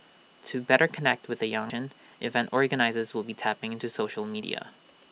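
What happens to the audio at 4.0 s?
At 4.0 s you're inside a jitter buffer speed-up, 3.68 to 4.94 s: the receiver trims pitch-period slices, roughly 150 ms total, so speech runs about 111% fast, same pitch, rushed.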